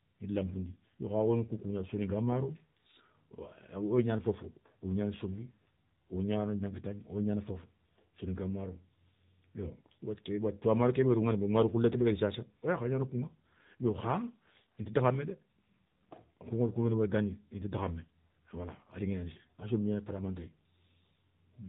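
Throughout the recording the speech has passed through the AMR narrowband mobile codec at a low mode, consistent with roughly 7.4 kbps. Nothing above 4 kHz survives, so the sound is muffled and telephone-like, and the sparse pulse excitation leaves it plainly buzzy and synthetic.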